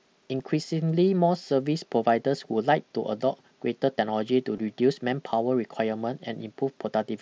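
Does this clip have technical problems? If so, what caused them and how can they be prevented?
Yes. Concealed Bluetooth headset packet loss occurs at 0.39 s (a single lost frame of about 7.5 ms) and at 4.56 s (about 15 ms, fitting two frames). The receiver filled each gap with the best-matching recent stretch of waveform. That leaves the single loss nearly hidden and the two-frame run a brief buzzy repeat with a small warble, not the silent hole or click of a plain dropout. Keeping the headset close to the phone, away from Wi-Fi congestion and body shielding, prevents these losses.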